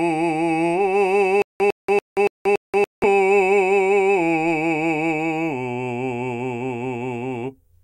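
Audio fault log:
1.42–3.04 s, stutter with silent gaps: a burst of about 104 ms of the music repeats five times, each followed by about 181 ms of dead digital silence, a steady 284 ms cycle. This is likely a stalled player or stream replaying its last fragment at each retry, so the intervening music is lost.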